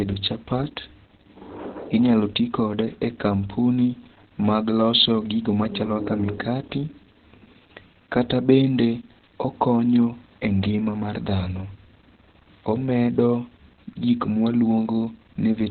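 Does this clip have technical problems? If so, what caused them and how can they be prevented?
Yes. Opus voice compression affects the whole clip. Nothing is heard above 4.4 kHz, so the speech sounds muffled. Coarse coding of the excitation makes it hoarse and slightly robotic. This fits narrowband SILK near 8 kbps. Encoding at 24 kbps or more prevents it.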